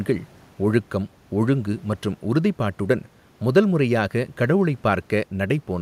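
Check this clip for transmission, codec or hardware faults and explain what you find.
Nothing in the speech points to a transmission, codec or hardware problem; there is nothing to report.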